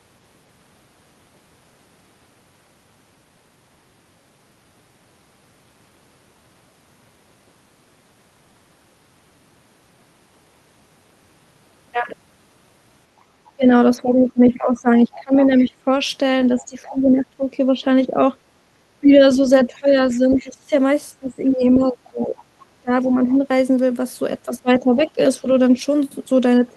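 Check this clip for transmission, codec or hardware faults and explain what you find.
Echo-canceller trouble during double talk is the main problem here, with three related faults across the second half of the speech.

Speech suppressed in double talk runs from 13.56 to 23.44 s and again from 24.45 s to the end, roughly 4 s of dips in the first stretch. The canceller likely couldn't separate the talker from the far end's echo, so it pulled both down, by around 20 dB at worst in the first stretch and around 15 dB in the second.

The other side's voice leaks through at 14.07 to 16.98 s, 19.64 to 20.44 s, and in short scraps at 22.22 and 23.28 to 23.37 s. That's likely residual loudspeaker echo the canceller didn't fully remove, sitting faint, roughly 20 to 30 dB below the talker.

Background gated by the echo canceller appears at 18.46 to 18.72 s. The canceller clamped the mic while the loudspeaker played, so the room sound drops by about 13 dB for roughly 0.3 s, then comes back once it releases.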